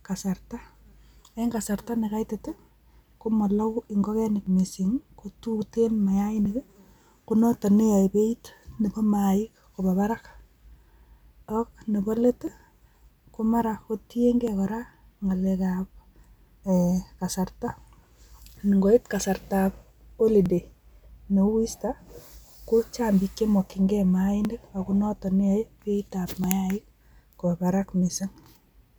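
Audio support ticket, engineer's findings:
Periodic USB or driver dropouts, 4.47 s to 28.44 s. Regular ticks every 2.0 s, about fifteen, heard only under speech. Each skips a couple of milliseconds, no silence fill. Probable cause: bus or driver stalls at a fixed interval.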